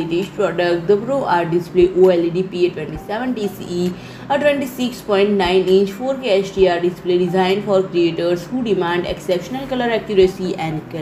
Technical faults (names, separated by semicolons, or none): none